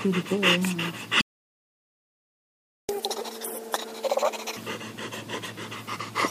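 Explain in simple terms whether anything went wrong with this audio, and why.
At 1.21 s the sound stops dead and stays silent until 2.89 s, a gap of about 1.7 seconds. This is a playback stall: the player most likely ran out of data or was held up, so nothing came out until it recovered. Unlike a brief dropout or a click, it is a long, clean silence, and when the sound returns it picks up where it stopped rather than jumping ahead.

From 2.89 s to 4.57 s the sound plays at twice its normal speed and comes out high, by roughly ten semitones, close to an octave. This is catch-up at higher speed: the player rushes through the material it fell behind on to win back the lost time. A simple pitch fault would change only the pitch. Here speed and pitch rise together, and both drop back to normal at 4.57 s.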